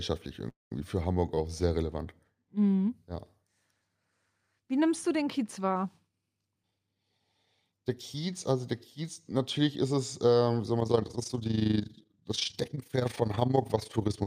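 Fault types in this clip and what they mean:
call audio freeze: From 0.49 to 0.72 s the speech stops and the last sound is held briefly, then decays to near silence for about 170 ms of the roughly 218 ms gap. The likely cause is packets stalling in transit so the jitter buffer ran dry. When audio resumes it carries on where it left off, so nothing is lost, but everything after is pushed back about 218 ms.
jitter buffer speed-up: The receiver, holding more buffered speech than its target, trimmed short pitch-period segments repeatedly to reduce delay. From 6.35 to 7.21 s the speech runs at 120% speed with pitch unchanged, shedding roughly 200 ms and sounding noticeably hurried. A milder pass from 7.65 to 8.15 s, just before "also der", runs at 107% and removes around 50 ms, and it also sounds hurried.
overlap-add ripple: From 10.80 s, right after "ist es ähm soll", to the end of the clip, the speech was reassembled from windowed frames whose overlap does not sum to constant gain. 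The level swings by about 11 dB once per frame, at roughly 30 Hz, heard as a rapid flutter or rough tremolo laid over the speech for the remaining three and a half seconds.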